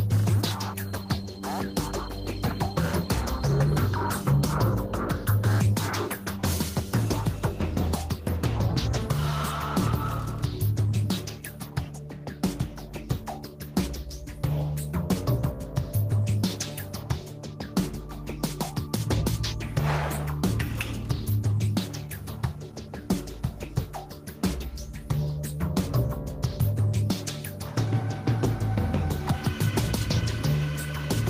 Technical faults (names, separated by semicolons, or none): gain pumping